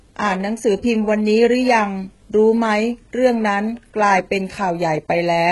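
Throughout, s sounds turn gritty and lispy and the upper treble sounds metallic, with nothing above 11.5 kHz. This is likely heavy HE-AAC compression, consistent with roughly 12 kbps.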